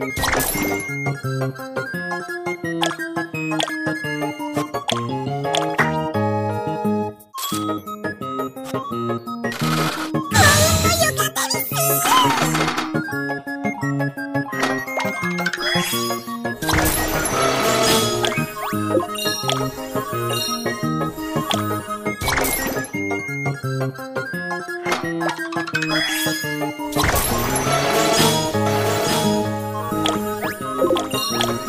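A second capture path or an out-of-step edit has likely mixed the same audio in twice, giving a doubled audio track from 28.66 s to the end. A full-band copy about 5 dB quieter trails roughly a second behind, starting abruptly with no decay or room colour.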